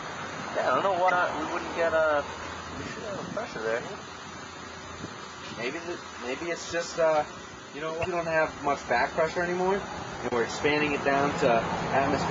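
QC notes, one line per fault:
1.06–1.1 s and 8.01–8.05 s: damaged data in a compressed stream. Each is a brief glitch of about 45 ms where corrupted frames throw the decoder out of sync until it finds the next header. It shows as a short broadband smear on the spectrogram and a ragged, discontinuous patch in the waveform.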